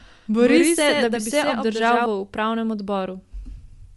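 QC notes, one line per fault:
Throughout: Bluetooth LC3 compression. Plainly audible codec damage, with nothing above 11.5 kHz and a breathy, grainy edge on the speech. Likely caused by LC3 coding in 10 ms frames: the upper band is discarded and partly noise-filled, which fits a bitrate around 48 kbps.
0.00–2.06 s: doubled audio track. Already running when the clip opens, a second full-band copy of the speech trails by about 100 ms at about 5 dB below the original. It has no room tail and stops abruptly at 2.06 s. This is likely a slower duplicate capture path mixed back in.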